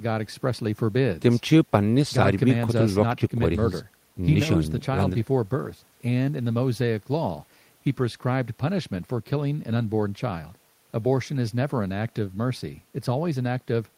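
Nothing here catches the ear as a technical fault; the speech runs its whole course without anything going wrong along the way.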